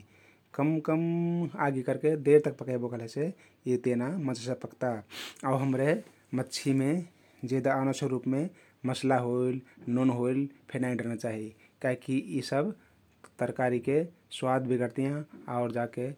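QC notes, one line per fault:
No faults heard anywhere in this speech recording.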